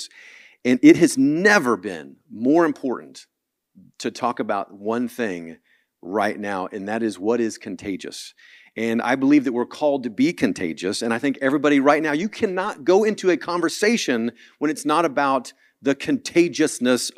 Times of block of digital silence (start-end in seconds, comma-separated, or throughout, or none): none